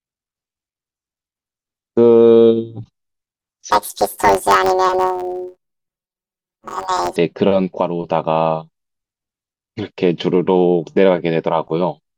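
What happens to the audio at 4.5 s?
At 4.5 s the speech is inside a stretch from 3.71 to 7.17 s where planar audio is read as interleaved. Each 10.88 ms block stores all left samples and then all right samples, but it is read as alternating pairs, so every block plays twice at double speed. Because the blocks are so short, the result is a robotic buzz at about 92 Hz rather than a clear octave jump. A spectrogram shows vertical striations every 11 ms and a comb of harmonics spaced about 92 Hz apart. The waveform shows an abrupt seam about every 5.4 ms, with each block's two halves repeating as a pair.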